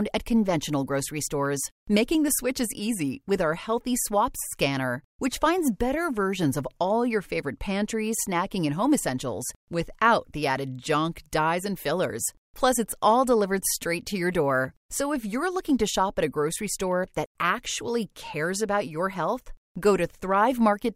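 No technical fault can be heard anywhere in the audio, which holds steady and continuous throughout.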